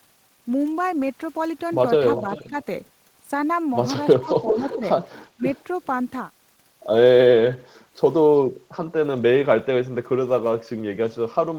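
At 2.17 to 2.46 s there's an echo leak: a copy of the speech comes back about 0.39 s late, roughly 15 dB under the direct sound. It's likely a far-end loudspeaker echo the canceller didn't fully remove. Right after, at 2.48 to 2.55 s, the speech is suppressed in double talk, dipping around 10 dB for a brief moment, likely because the canceller couldn't tell the talker from the echo and turned both down. From 4.2 to 4.83 s the same dip returns, about 10 dB, while from 4.28 to 4.77 s the leaked echo arrives at roughly the same level as the speech. At 5.36 to 5.44 s a short, much deeper cut of around 25 dB chops the speech. Fainter echo scraps, still about 0.39 s behind, follow at 5.55 to 5.64 s (around 35 dB down) and 7.6 to 7.82 s (around 40 dB down).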